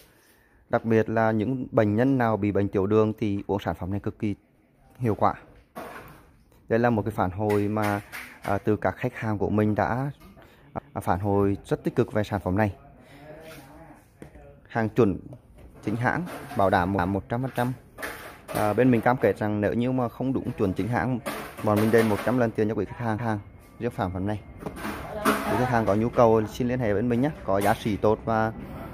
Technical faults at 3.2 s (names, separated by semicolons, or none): none